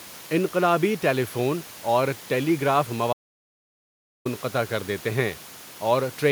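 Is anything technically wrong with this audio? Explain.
Yes. An audio dropout to silence runs from 3.13 s to 4.25 s, taking out about 1.1 s of the speech. The input was likely lost for that stretch, through a disconnected device, a failed link or a stray mute, while the recorder kept writing silence. The speech cuts off abruptly and resumes mid-flow, and even the room noise, normally about 22 dB below the speech, disappears completely, leaving dead silence where that second of speech should be.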